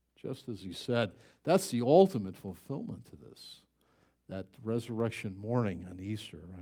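Dropped samples at 2.48 s, between "the ultimate" and "to this that", and at 5.00 s, after "to this that", give two sharp clicks in this speech, likely where a fraction of a millisecond went missing and the waveform jumped.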